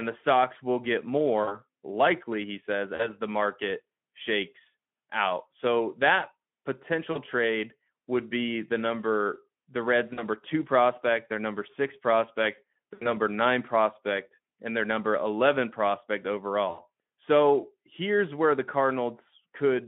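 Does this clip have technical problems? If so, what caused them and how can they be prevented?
Yes. VoIP packet loss concealed by the speech codec occurs at 1.44, 2.95 (after "likely he says", before "the market shakes out"), 7.11 (before "trade would be the"), 10.13, 12.94 (after "their number six prospect", before "nine prospect and their") and 16.69 s. The gaps last about 40 ms, except the last two at about 80 ms. Each time, the decoder stretched the preceding sound from its last pitch and filter state with falling gain, so each dropout comes out as a brief fading, buzzy or coloured smear rather than silence. A jitter buffer, forward error correction or a more reliable network path would prevent these losses.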